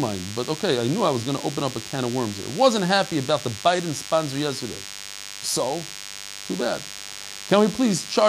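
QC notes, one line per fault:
Throughout: DECT cordless phone buzz, a steady thin 100 Hz buzz rich in harmonics, around 15 dB below the speech, from rectified radio bursts. Its raspy pulse train sets it apart from smoother mains hum.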